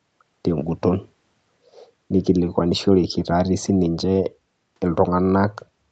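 A speech recording with no technical faults to report. It has passed through a call's microphone processing and WebRTC call path, and nothing is heard above 8 kHz, which fits an Opus call codec set to that bandwidth.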